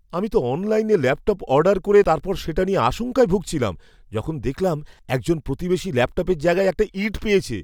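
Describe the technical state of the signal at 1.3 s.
At 1.3 s the speech signal is intact, with no audible dropout, clipping, distortion or other fault at that point.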